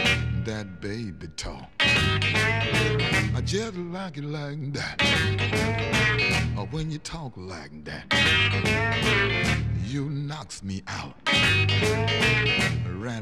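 From 3.65 to 4.99 s, and again from 9.13 to 10.32 s, the sound slows by about 6% and drops about 108 cents, just over a semitone. It then snaps back. This is likely a drift correction step, a clock-matching rate jump.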